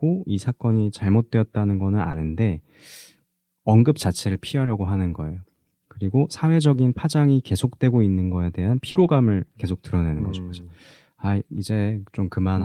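At 0.71 to 0.81 s, a lost packet rebuilt from error correction leaves no gap, just 60 ms of rougher, noisier speech decoded from a low-bitrate copy. Short concealed packet loss follows at 2.11, 4.65 and 8.91 s (20, 20 and 40 ms): the decoder stretches the previous sound into a brief smear or wobble, unlike the coarse but real copy. Each is followed by further error-correction rebuilds at 2.13 to 2.15, 4.67 to 4.69 and 8.95 to 9.09 s.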